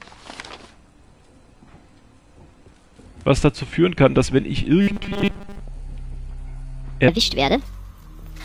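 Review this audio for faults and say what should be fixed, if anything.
From 4.81 to 5.60 s the sound collapses into a rigid, metallic buzz pitched at 200 Hz. That's robotic sound from repeated short buffers. The likely cause is fresh audio not arriving in time, so the player keeps looping the last 5 ms chunk, and one over 5 ms gives exactly that 200 Hz tone. Most of that stretch is repeats rather than real material, so what was there is largely skipped. Giving the playback side a deeper jitter buffer would stop it running dry.

From 7.08 s to the end, the audio runs at 1.41 times its proper speed, a section at the wrong speed. Tempo and pitch jump together at that point, so everything sounds hurried and sits roughly seven semitones high. This likely comes from that segment being played or resampled against the wrong clock rate. Checking that every segment's sample rate matches the playback clock before joining them would prevent it.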